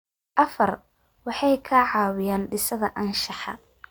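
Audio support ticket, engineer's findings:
Nothing to flag here, the speech comes through steady the whole way with no faults found on this listen.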